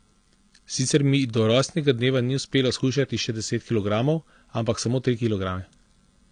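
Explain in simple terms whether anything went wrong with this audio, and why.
Yes, two things went wrong. The whole speech clip shows low-bitrate audio saved at a high bitrate. It was likely squeezed hard once, then re-saved larger. The lost detail cannot come back.

There are also dropped samples: single sharp clicks at 2.17 s, after "do rojstnega", and 3.48 s, after "ni uspelo shujšati še". Each skips a tiny fraction of a millisecond.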